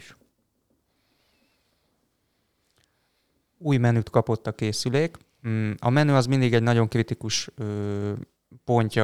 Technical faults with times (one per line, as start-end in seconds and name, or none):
none